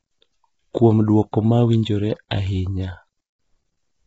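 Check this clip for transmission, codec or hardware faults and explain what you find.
Two faults affect this speech clip: codec damage throughout and one pre-echo.

Low-delay AAC compression, throughout: the speech sounds heavily rough and grainy, with noise filling the gaps between harmonics and nothing above 7.7 kHz. This is likely AAC-ELD, whose short frames resolve pitch poorly and starve the detail at what sounds like a bitrate around 16 kbps.

Pre-echo, 1.31 to 1.33 s, just before "ma winjore ahinya": a brief hiss of about 20 ms leads into the attack, which sounds softened. The transform block spread quantisation noise sized for the loud onset back over the quiet moment preceding it.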